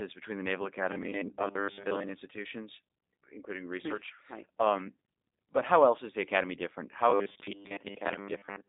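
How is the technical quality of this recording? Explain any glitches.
The quality is poor: the speech passes through a low-bitrate voice codec for its whole length and breaks into a robotic buzz twice.

The G.729 codec damage runs throughout. The sound is consistent with G.729A at 8 kbit/s, which does not store the waveform. It rebuilds speech from a vocal tract filter, a pitch predictor and a few pulses per 10 ms frame. The band is squeezed to roughly 200 Hz to 3.7 kHz, with nothing above 3.7 kHz. The speech stays intelligible but sounds clearly rough, synthetic and muffled.

Robotic sound from repeated short buffers appears from 0.91 to 2.09 s and again from 7.1 s to the end at 8.69 s. The likely cause is audio arriving too seldom. The playback side fills each gap by looping the last short stretch it holds and skips most of the real audio. The 100 Hz buzz fits a 10 ms repeat. It forces a fixed metallic drone onto the speech, which only loosely follows the original syllables.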